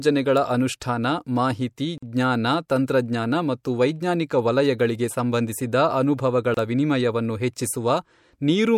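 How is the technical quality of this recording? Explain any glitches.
The speech is interrupted twice by a gap at a join of encoded pieces: about 45 ms at 1.98 s, after "ಅನುಷ್ಠಾನ ಮಾಹಿತಿ", and about 27 ms at 6.54 s, after "ವೈಜ್ಞಾನಿಕ ವಲಯಗಳಿಗೆ ಸಂಬಂಧಿಸಿದ ಅನುಭವಗಳ". Separately encoded pieces were joined untrimmed, so encoder delay and end padding leave abrupt, smeared dropouts before the speech resumes where it stopped.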